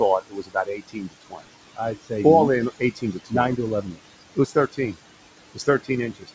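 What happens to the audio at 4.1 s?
At 4.1 s, the speech cut by the noise suppressor ends. From 3.82 s, just after "nine to", the suppressor took speech for noise. It dipped it by up to about 22 dB, so it sounds swallowed and faint.

Noise suppressor artifacts are present here too. The background is pulled down by about 20 dB frame by frame, so it sinks between words and rises under them.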